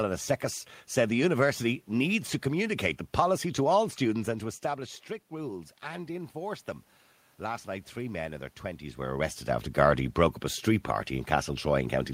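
Automatic gain rising, 4.17 to 6.7 s: after the talker moves back near 4 s and the level falls about 13 dB, the gain control lifts about 4 dB, swelling voice and room noise together.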